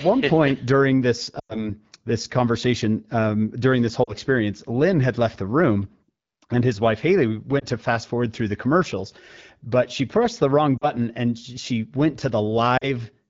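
Lost AMR speech frames at 1.39–1.69 s, 4.04–4.13, 7.59–7.65, 10.78–10.85 and 12.77–12.88 s: corrupted frames are concealed by repeating the last pitch and vocal tract settings at fading gain. The result is a smeared warble, longest and fading toward silence at 1.39 s, that shows as blurred harmonics and a sagging waveform envelope.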